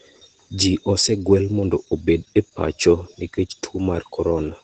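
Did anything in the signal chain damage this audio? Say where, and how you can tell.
Yes, at the codec stage: Opus voice compression throughout. Nothing above 8.8 kHz, and the speech is hoarse and slightly robotic, which fits coarse SILK coding near 12 kbps.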